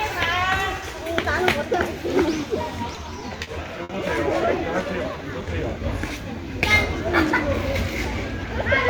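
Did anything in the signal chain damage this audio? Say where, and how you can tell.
Yes. Network stage: repeated stalls (stutter) from 2.95 to 3.91 s. Five gaps, longest 60 ms, 130 ms filled by extending the last sound as late packets emptied the jitter buffer.

Jitter buffer slow-down, 4.86 to 5.80 s: the sound drags to 94% speed at unchanged pitch, adding 64 ms as repeated pitch periods rebuild the buffer's reserve.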